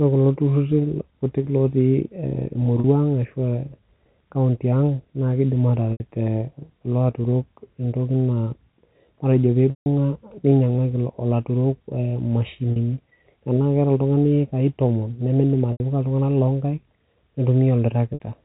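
Packets were lost at 2.8, 5.92, 9.7, 12.72, 15.72 and 18.14 s (40, 80, 160, 40, 80 and 60 ms), and the receiver bridged each gap by repeating the last pitch period. This packet loss with pitch repetition sounds like a briefly held, buzzy tone, while the 160 ms loss fades toward silence before the speech cross-fades back.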